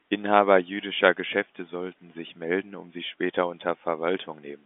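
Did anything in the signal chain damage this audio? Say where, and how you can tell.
No, the audio carries only the narrow telephone band of the G.711 telephone coding it passed through, roughly 200 Hz to 3.5 kHz with nothing above about 3.7 kHz, and no damage from any stage of the signal chain can be heard.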